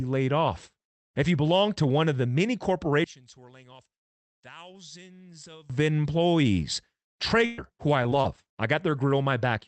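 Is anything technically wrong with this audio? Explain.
Yes, there are four kinds of fault in this speech.

From 3.04 to 5.70 s, the level drops by about 22 dB and only a faint residue of the sound remains. The likely cause is one channel inverted, so the shared content cancels in a mono sum. On a waveform this shows as a sharply shrunken envelope. A spectrogram shows the low end and the voiced harmonics largely gone.

From 7.45 to 7.60 s, just before "who I", a burst of packet loss removes about 120 ms. The receiver stretches the last sound and fades it out, then jumps ahead. A spectrogram shows the last sound frozen and dimming into a hard restart.

From 8.04 to 8.48 s, just after "who I", repeated packet loss (robotic sound) punches four short holes, none longer than 24 ms. Each is patched by continuing the prior sound, and together they cover about 66 ms. The result is choppy, with pieces missing. 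On a spectrogram it appears as repeated frozen slivers breaking the harmonic tracks.

At 7.58, 8.90 and 8.96 s, there is a lost packet rebuilt from error correction. Each 20 ms frame comes from a low-bitrate copy carried by the next packet. There is no gap, just a brief grainy roughness. On a spectrogram these show as short, noisier, blurred vertical strips.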